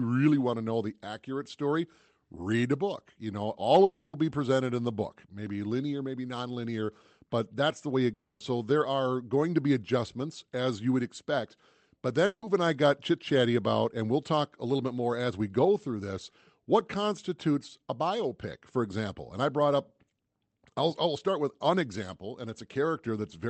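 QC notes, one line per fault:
3.84 to 4.14 s, long network dropout: packets likely stopped arriving, so the receiver stretched the last sound into a fading buzz for about 290 ms, and that audio never returns.
8.13 to 8.41 s, long network dropout: incoming audio likely halted; concealment covers about 270 ms with a decaying hiss, then roughly 10 ms of silence before sound resumes minus the lost part.
12.26 to 12.43 s, long network dropout: a likely gap in delivery leaves about 160 ms of synthesized, fading continuation, then around 30 ms of silence, and the missing audio is skipped.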